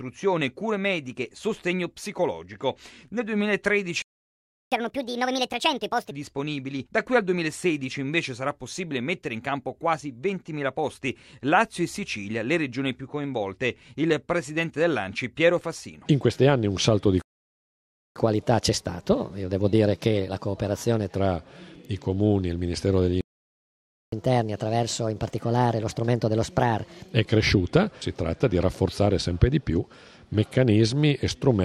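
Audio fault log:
4.02–4.72 s, playback stall: the sound cuts to silence for about 0.7 s mid-flow, likely the player running dry or its thread getting blocked, then picks up where it left off.
4.72–6.11 s, catch-up at higher speed: the backlog is resampled at 1.5x, so everything runs fast and jumps up roughly a fifth in pitch before settling.
17.22–18.16 s, playback stall: another dropout to silence, about 0.94 s, likely the same starved or blocked player.
18.16–21.16 s, catch-up at higher speed: a gentler 1.15x catch-up, about two semitones sharp, for 3 s.
23.21–24.12 s, playback stall: a third gap of about 0.92 s, likely from a starved or stalled player again.
24.12–27.12 s, catch-up at higher speed: 1.25x for 3 s, around four semitones up, then normal speed returns.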